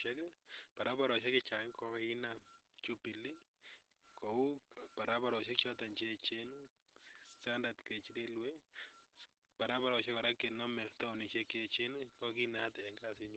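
The samples appear to have been likely rounded to a very coarse grid without dither, which fits about 9 bits of resolution. Because the rounding error tracks the signal rather than forming a steady hiss, the speech carries a grainy distortion that shifts with each syllable, sitting roughly 30 dB below the speech. Quiet passages turn gritty, and the softest decays crumble or sputter instead of fading smoothly. This low bit depth without dither runs through the whole clip.

Throughout, the speech has also passed through Opus voice compression in its SILK mode at a rate low enough that coding damage is plainly audible. The sound points to roughly 12 kbps in wideband, with nothing above 8.5 kHz, so sibilants and breath lose their top end and the voice sounds muffled. The linear-prediction coder's coarse excitation, updated in 20 ms frames, adds a hoarse, slightly robotic texture to voiced sounds.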